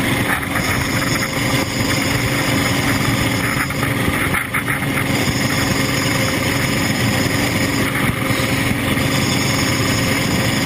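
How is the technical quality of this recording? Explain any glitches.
The recording is hampered by gain pumping that runs through the whole clip. The gain ducks by about 5 dB under each loud sound, squashing the dynamics. That's likely input gain set far too high, with a fast limiter clamping down on the peaks.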